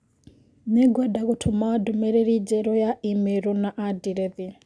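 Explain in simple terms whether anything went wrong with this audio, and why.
Nothing went wrong here; listening through the speech, there's no glitch, dropout or distortion anywhere to point to.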